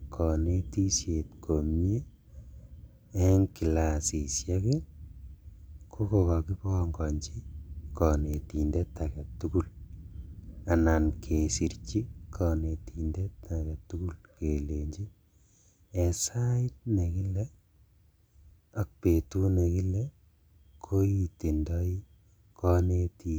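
Nothing goes wrong anywhere in this speech recording, so there's no technical fault to point to at any moment.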